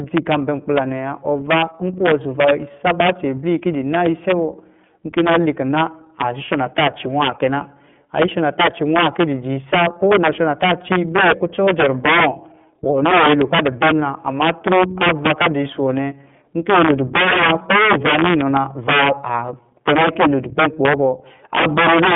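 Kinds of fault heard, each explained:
Integer overflow: Throughout the clip, the speech is driven about 12 dB past full scale, and the loudest peaks, a few percent of all samples, wrap around instead of being held at the limit. Each one jumps from the top of the range to the bottom, so the loud peaks carry harsh, violent cracks. These are far sharper and more broken-sounding than ordinary clipping, because the waveform flips sign rather than flattening.
iLBC codec: Throughout, the speech sounds like narrowband VoIP. The line passes roughly 150 Hz to 3.5 kHz, and nothing above 3.7 kHz survives. The codec works on 30 ms frames and codes each frame's excitation independently of the one before, which fits its 13.33 kbps mode. The damage is plainly audible: the speech stays intelligible but turns rough and somewhat synthetic, and it is muffled from the missing upper band.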